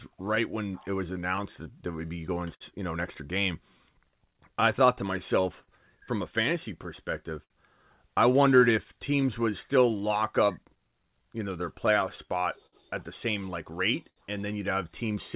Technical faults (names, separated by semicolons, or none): clock drift between sender and receiver; scattered short gaps; repeated timing corrections; repeated stalls (stutter); short stall from a late packet